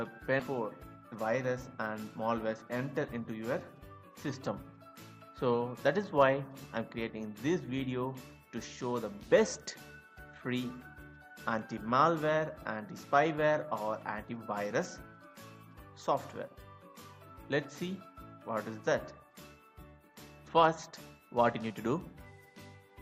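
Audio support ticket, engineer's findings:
Skip ahead at 0.39 s. Abrupt forward jump with no fill; about a second of audio gone, both sides spliced nearly directly. Probable component: jitter buffer discarding queued audio on overflow, or loss in transit, dropping latency by roughly that second.

Jitter buffer speed-up, 2.24 to 4.11 s. Playback runs at 111% with pitch unchanged, so it sounds hurried. Receiver trimming short pitch-period chunks repeatedly to drain excess buffered audio; about a fifth of a second removed overall.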